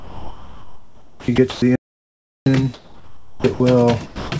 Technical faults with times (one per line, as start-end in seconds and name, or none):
0.00-1.62 sound dropped by the voice detector
1.76-2.46 audio dropout to silence
2.74-3.44 comfort noise in place of the background
3.40-3.44 onset clipped by the voice detector
3.54-3.60 sound dropped by the voice detector
4.06-4.32 sound dropped by the voice detector